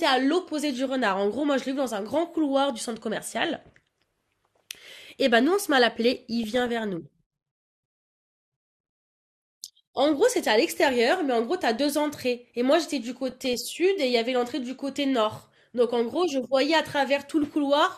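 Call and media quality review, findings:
DAB burbling at 6.43–6.69 s, 13.30–13.65 s and 17.44–17.48 s: weak DAB reception lets bit errors of well under one percent slip past error correction into MP2 audio data, corrupting sub-band samples and scale factors. Speech gets short noise blips in single sub-bands.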